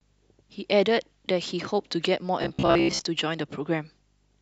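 From 2.42 to 3.07 s, new audio was likely arriving too seldom, so the playback path kept filling the gaps by replaying its last short buffer, about half of what is heard there being repeats while the real speech in between was skipped. The replays recur at 66.7 Hz, which fits a buffer of about 15 ms, and that rate imposes a fixed pitch: this is robotic sound from repeated short buffers, a rigid metallic buzz that only loosely tracks the speech.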